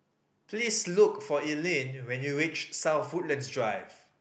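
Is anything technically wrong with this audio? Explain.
Yes. At 0.57–0.67 s and 2.97–2.99 s, a lost packet was rebuilt from error correction. Opus's in-band error correction replaced about 60 ms, then 20 ms, with low-bitrate copies carried in later packets. The waveform shows no gap, but the sound turns rougher and noisier, and a spectrogram shows grainier, smeared harmonics.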